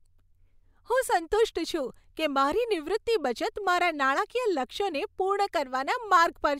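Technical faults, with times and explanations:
No technical faults are audible anywhere in this speech recording.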